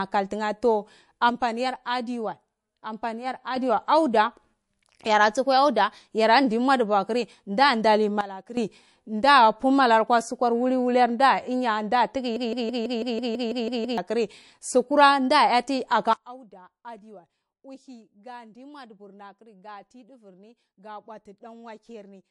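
MP3 compression runs through the whole clip. Speech sounds watery, and nothing remains above 11.3 kHz. The audible damage fits a low bitrate near 52 kbps.

At 1.30 s a sudden gain jump drops speech and background together by about 6 dB until 3.56 s. A likely unramped gain change caused it.

From 8.21 to 8.57 s the level falls by about 14 dB, another sudden gain jump.

From 12.36 to 13.98 s a broken-record loop repeats a 0.16 s piece ten times, back to back. The stream likely stalled and resent its last fragment. The audio for that span is lost.

At 16.13 s a third sudden gain jump cuts the level by about 22 dB, lasting to the end.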